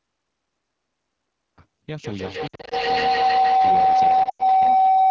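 AMR wideband (HD Voice) codec damage runs through the whole of this speech recording. Coding the band below 6.4 kHz with a pulse-excited vocal tract model and filling the top with shaped noise, it sounds rough and raspy here, which fits the low 8.85 kbit/s mode. A cut-off start leaves digital silence from 0 to 1.58 s, where the audio jumps in mid-sound with no natural attack because the recording or stream began late. Feedback howl enters at 2.04 s and lasts to the end. Two devices sharing a room and a call create a loop with a delay of roughly 150 ms that gains level on each pass, narrowing to a tone near 700 Hz that peaks about 13 dB above the speech. Lost AMR speech frames appear from 2.47 to 2.74 s, 160 ms missing in runs of up to 60 ms, and from 4.23 to 4.42 s, 120 ms missing with a 100 ms run. Radio errors failed the frame checksums, so the decoder repeated the last good settings at falling gain, dropping the sound to near silence within two frames. 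The call microphone processing, which leaves nothing above 8 kHz, is not a fault.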